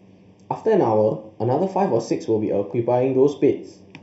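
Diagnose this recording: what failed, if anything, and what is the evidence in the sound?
The fault is a channel delay (comb filtering) at the stereo-to-mono summing stage. One channel arrives a fraction of a millisecond late, so shared content cancels at evenly spaced frequencies starting around 1.5 kHz, leaving the speech hollow and phasey throughout.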